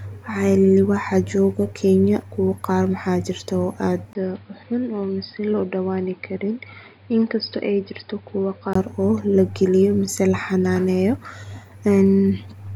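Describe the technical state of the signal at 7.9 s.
At 7.9 s the speech sounds dull and boxy, with nothing above 5.1 kHz, a level about 5 dB lower and a new noise floor. From 4.13 to 8.75 s, after a 20 ms gap, the input likely switched to a poorer device.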